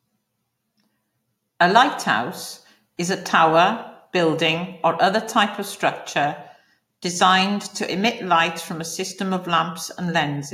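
No audible technical faults.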